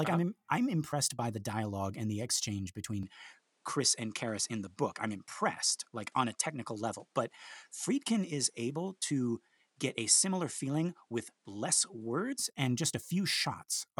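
At 3.03 s the speech abruptly loses its top end: nothing is left above 11.4 kHz, and a new, faint background noise appears roughly 45 dB under the voice. The level holds steady and there is no gap at the change. At 12.39 s the fuller sound returns. The likely cause is an input switched to a poorer device, not a filter or codec narrowing, because a different noise floor arrives and leaves with it.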